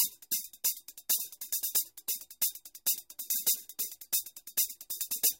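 At 3.35 s the decoder drops whole compressed frames, either because they never reached the file or because it rejected them as damaged, so this is a case of compressed frames skipped. The frame length here is 26.1 ms, and about two frames go missing, which takes out roughly 50 ms of audio. The sound lurches forward by that amount.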